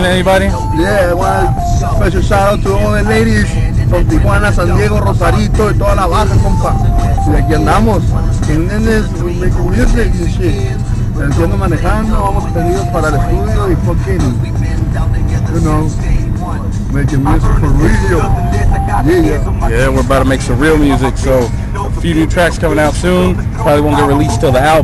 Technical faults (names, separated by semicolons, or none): none